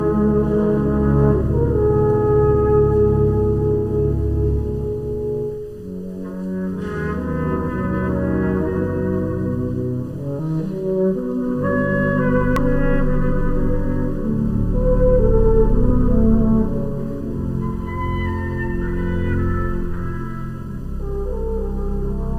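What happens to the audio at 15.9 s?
A brief burst of damaged data in a compressed stream occurs at about 15.88 s. It lasts about 16 ms. Part of the encoded stream is wrong there. The decoder cannot read those frames. It loses sync and hunts for the next valid frame header. The result is a short chirp or blip.

The channel delay (comb filtering) continues through this moment. One channel arrives less than a millisecond late. When both are summed to mono, shared content cancels at evenly spaced frequencies, starting at around 700 Hz. The notches stay fixed. The sound is hollow and phasey, both under the blip and around it.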